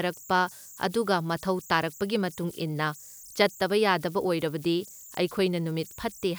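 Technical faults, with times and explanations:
Throughout: converter idle tones. A whistle near 7 kHz rides through the pauses in the speech and turns to grainy noise under the speech, about 24 dB below the signal. An undithered delta-sigma converter settles into repeating bit patterns at low input levels, producing this tone.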